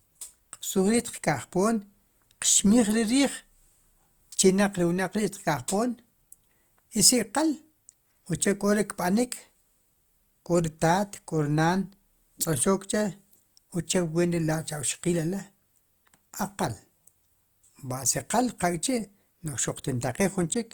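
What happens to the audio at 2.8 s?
At 2.8 s the speech is inside Opus compression that runs through the whole clip. The encoder's CELT mode is most likely starved of bits, as at about 24 kbps, and fills bands with folded or noisy content, so the speech sounds plainly grainy and rough while still reaching up to 20.1 kHz.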